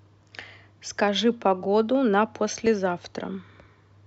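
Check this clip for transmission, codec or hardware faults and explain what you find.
One fault shows up here. At 2.66 s there's a block of digital silence, about 2.9 ms of zeros, which fits a 128-sample output buffer not being filled in time. The hard cut in and out makes a quick tick.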